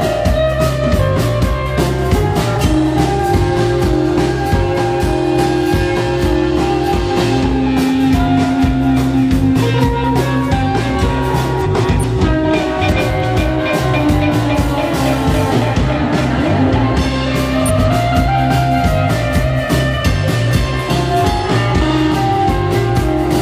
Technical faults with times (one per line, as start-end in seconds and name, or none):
11.64-12.04 frames out of order
12.95-13.24 frames out of order
17.66-17.89 frames out of order